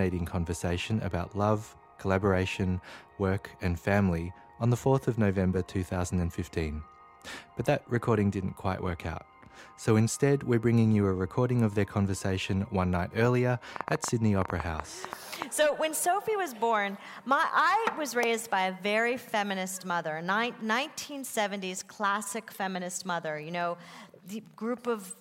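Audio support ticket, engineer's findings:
Train of clicks, 13.76 to 15.43 s: roughly fifteen near-identical pops at about 8.4 per second, unevenly spaced, peaking about 15 dB over the sound. Likely interference from nearby gear or a faulty connection or power supply injecting pulses. Worth checking cabling and grounding first.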